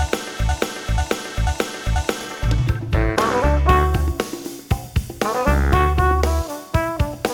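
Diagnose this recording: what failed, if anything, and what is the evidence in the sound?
From the very first instant the audio is caught in a broken-record loop: a fragment of roughly 0.49 s plays four times back to back, identical each pass, until the loop releases at 2.21 s. It is already under way when the recording begins. The likely cause is a stall in the playback or streaming buffer, with the stage re-sending the last block it held. Whatever should have sounded during those first 2.2 s is lost.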